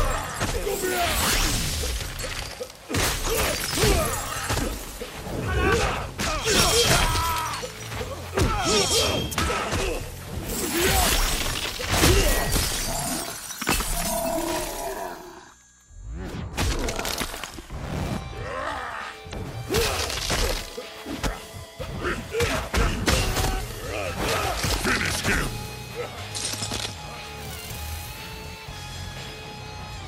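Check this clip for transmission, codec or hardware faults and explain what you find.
One fault is audible. From 19.29 to 19.34 s, a brief disruption of about 40 ms breaks the audio. It is damaged data in a compressed stream: corrupted bytes made the decoder misread frames and lose sync until it found the next frame header.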